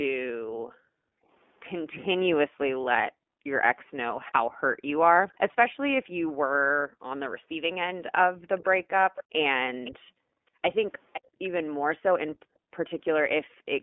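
Throughout, the iLBC codec squeezes the speech into a 250 Hz to 3.5 kHz band with audible roughness. The synthetic graininess, rather than mere muffling, fits its 20 ms, 15.2 kbps mode. Background gated by the echo canceller drops the room sound by as much as about 40 dB at 0.46 to 1.29 s, 3.12 to 3.47 s, 6.86 to 7.42 s, 8.36 to 8.45 s, 9.98 to 11.4 s and 12.36 to 12.71 s. Unlike codec dropouts, only the ambience vanishes, and it returns cleanly. From 8.58 to 11.48 s a faint copy of the speech trails about 0.51 s behind it, roughly 15 dB down. This is likely an echo leak from a loudspeaker side, and its fixed delay separates it from room reverberation.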